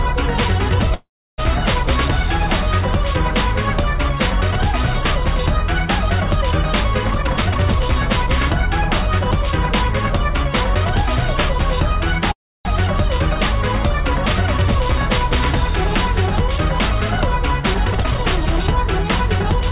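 Audio carried over a call path, with nothing above 4 kHz, consistent with G.711 mu-law at 64 kbps. Two call audio freezes interrupt it, at 0.94 to 1.40 s and 12.31 to 12.67 s. Each stretches the last sound into a fading buzz or hiss, then about 0.3 s of silence. The audio resumes where it stopped, with nothing lost. The likely cause is delayed packets emptying the jitter buffer. Two jitter buffer speed-ups follow, at 7.11 to 10.49 s and 17.87 to 19.69 s. Playback runs at 112% and 114% with unchanged pitch, sounding hurried. The receiver trims tiny pitch-period slices, roughly 0.4 s and 0.3 s in total, to shed excess delay.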